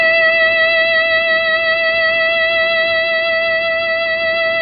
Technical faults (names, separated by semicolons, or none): AAC compression